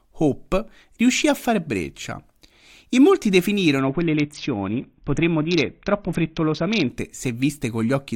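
From 3.78 s to 6.90 s the speech goes dull and gritty, the sound of a Bluetooth SBC bit pool drop. The link seems to have been congested, and the encoder cut its bit budget steeply, which points to a bit pool falling from around 28 to about 6, near 60 kbps. With so few bits the upper sub-bands were starved and the rest coarsely quantised. On a spectrogram the treble above a few kHz thins or vanishes in that span, with grainy noise smeared across the remaining bands.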